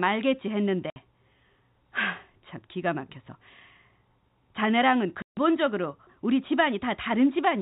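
At 0.90 s the speech drops out for 60 ms. At 5.22 s it drops out for 150 ms. Both are packet loss filled with silence. The receiver played nothing where packets went missing. Both gaps fit 30 ms packets. Their edges are hard.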